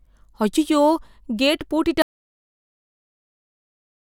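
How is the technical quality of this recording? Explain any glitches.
The recording has one serious fault. At 2.02 s, just after "அய்யய்யோ கேட்", an audio dropout to silence begins: the input was likely lost while the recorder kept writing silence. The speech cuts off mid-flow and silence, with no room tone, runs to the end of the clip.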